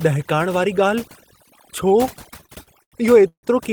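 A speech recording with overdone noise removal throughout: the suppressor has been set so aggressively that whole frequency bands are pulled down or switched off whenever they sit close to its noise estimate. The background drops and breaks up into twinkling, musical specks, and the quieter spectral detail of the voice is removed along with the noise. From 2.07 to 3.45 s there are repeated stalls (stutter): eleven separate hangs in which the playback stretches the last bit of sound to cover late-arriving audio, pointing to a jitter buffer repeatedly running dry. Together they fill 376 ms, about 27% of that stretch, with the longest hold lasting 153 ms. Nothing is actually dropped, but the speech drags and stutters through this section, and the longer holds fade before normal playback resumes.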